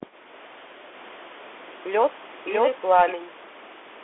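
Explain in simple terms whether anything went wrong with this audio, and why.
Yes, two things went wrong. The whole clip went through a Bluetooth CVSD headset codec: nothing above 3.8 kHz, so the speech sounds thin. Its grainy hiss and scratchy s sounds set it apart from plain muffling.

From 0.94 to 3.12 s there is a doubled audio track. A second, equally loud copy trails about 0.7 seconds behind, likely a second capture path. Unlike an echo, it never fades, has no room sound, and starts and stops abruptly.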